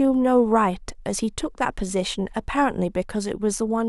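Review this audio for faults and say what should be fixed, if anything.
No faults; nothing needs fixing.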